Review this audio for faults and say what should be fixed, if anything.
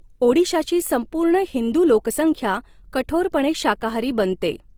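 Low-bitrate audio saved at a high bitrate, throughout: the speech was likely squeezed through a very low-bitrate stage, probably near 24 kbit/s, then re-saved as high-bitrate MP3, so those losses persist beneath a clean-looking file reaching 20.2 kHz. Keep the original source and encode once, at adequate bitrate, rather than re-encoding an already-compressed copy.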